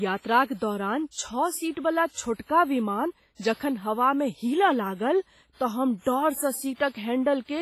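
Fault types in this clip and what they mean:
WMA compression: the speech rings and sounds washy, with a hiss that breathes with the voice and nothing above 15.3 kHz. The likely cause is heavy transform coding at a low bitrate, consistent with 24 kbps, spreading quantisation noise across long blocks.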